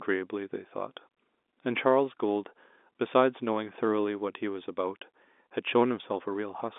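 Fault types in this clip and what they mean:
There are no fault types in this clip.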